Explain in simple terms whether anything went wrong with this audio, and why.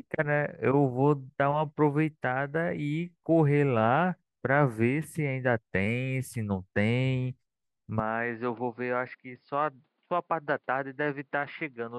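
From about 8.00 s to the end, the sound turns duller and a bit quieter, with nothing above 5.1 kHz and new background noise. It's likely the input switched to a poorer device.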